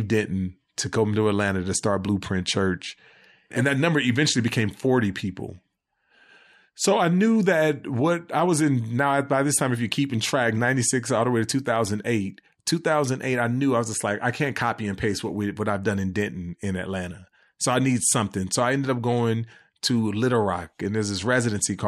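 No fault is audible anywhere in the recording: level, timing and continuity hold steady throughout, with no dropouts, clicks or distortion events to report.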